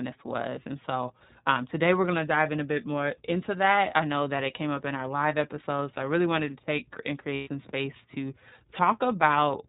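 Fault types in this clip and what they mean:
iLBC codec: The whole clip is band-limited to narrowband telephone quality, with nothing audible above 4 kHz, so sibilants and breath detail are dull. Each frame's excitation is coded independently, and the speech has a plainly audible rough, slightly synthetic grain throughout. The character fits iLBC's 30 ms frame mode at about 13.33 kbps. The damage is clearly audible on every phrase rather than confined to one passage.
lost iLBC frames: At 7.35 to 7.48 s, right after "wanted to take and", the signal is replaced for about 120 ms, which fits four consecutive 30 ms frames going missing. The decoder fills the gap by repeating the last pitch cycle blended with noise, so it sounds like a held, faintly buzzy vowel. Since iLBC frames stand alone, clean speech resumes almost immediately at "space to".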